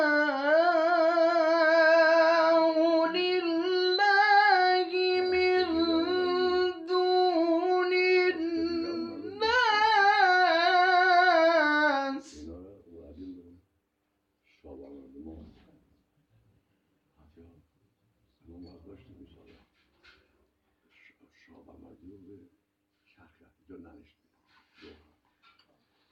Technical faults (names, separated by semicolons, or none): none